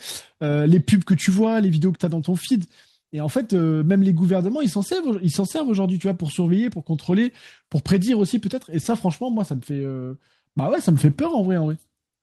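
Nothing in the speech stood out as a technical problem on listening.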